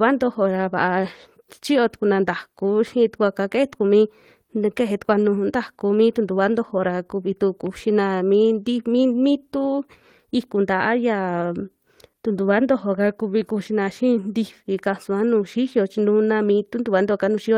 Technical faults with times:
none

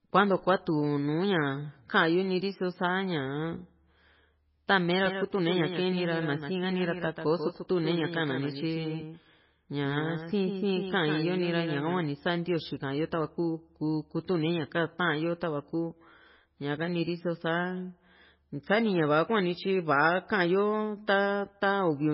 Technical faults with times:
0.00-22.14 MP3 compression
5.05-11.99 doubled audio track

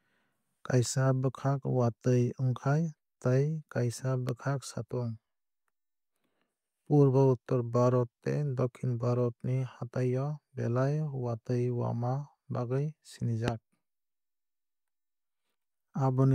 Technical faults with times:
4.29-4.31 loud pop
13.48-13.50 loud pop

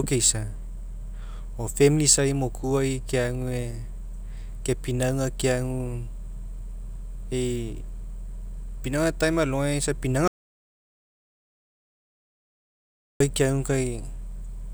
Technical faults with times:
10.28-13.20 audio dropout to silence

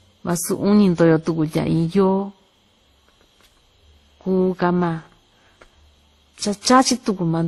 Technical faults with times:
0.00-7.48 transcoding between lossy codecs

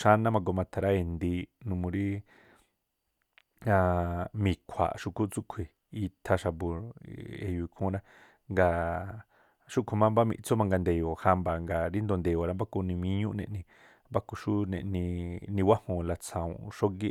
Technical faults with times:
none

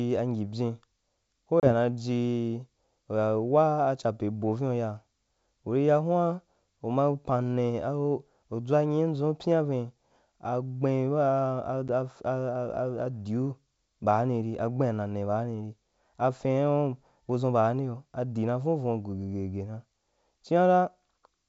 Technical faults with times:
1.60-1.73 packet loss on an ADPCM call
11.88 packet loss on an ADPCM call

